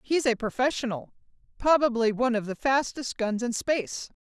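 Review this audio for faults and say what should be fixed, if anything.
Nothing here needs fixing: the speech signal is technically sound, with no faults to report.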